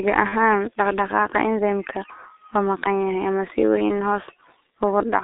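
G.723.1 codec coding runs throughout this speech clip. The line passes only about 300 Hz to 3.7 kHz, and the heavy low-rate coding, consistent with roughly 6.3 kbit/s, rebuilds the voice from a slowly updated model. The speech sounds muffled and hoarse, and its consonants are smeared.

VoIP packet loss concealed by the speech codec occurs from 0.29 to 0.35 s, just before "dhaqdhaqaaqa enzymeka waa maqan". About 30 ms of audio, which fits a single lost frame, was missing. The decoder bridged it by extending its last pitch and filter at falling gain, so a brief, fading smear replaces the speech.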